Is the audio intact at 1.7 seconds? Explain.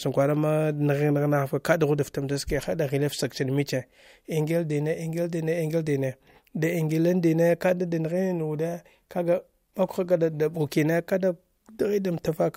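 Yes, the audio at 1.7 seconds is intact, with no audible fault at that moment.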